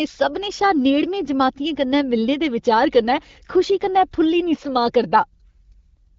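Nothing here is audible as a technical fault.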